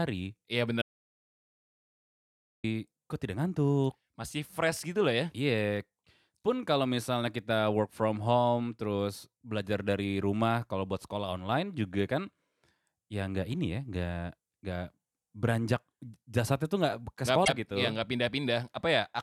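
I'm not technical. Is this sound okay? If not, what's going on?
No. From 0.82 to 2.64 s there is an audio dropout to silence: about 1.8 seconds of speech vanish into dead silence, likely from the input briefly disconnecting or muting. At 17.41 to 17.49 s, just after "tuh nggak ke", damaged data in a compressed stream causes a short glitch as the decoder loses its place.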